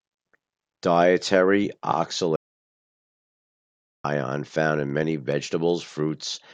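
At 2.36 s the speech cuts off abruptly into dead digital silence, with no room tone at all, and resumes mid-flow at 4.04 s, about 1.68 s lost. This audio dropout to silence likely came from the input briefly disconnecting while recording continued writing silence.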